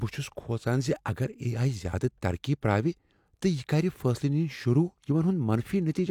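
There are no technical faults to describe in this speech, at any point in time.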